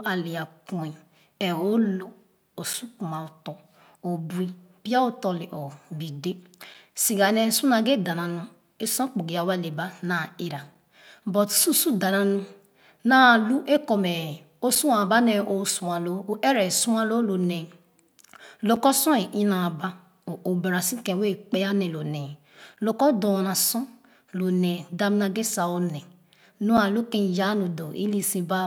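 At 2.73, 6.74, 10.75, 14.75, 18.76, 22.77 and 26.77 s, the speech breaks with a gap between chunks: a 6.5 ms hard-edged hole every 4.0 s, seen as thin vertical blank stripes.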